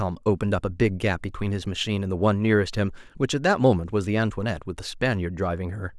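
Speech recording with no audible technical faults.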